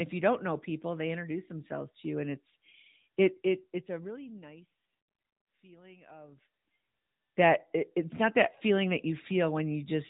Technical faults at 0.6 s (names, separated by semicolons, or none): AMR narrowband mobile codec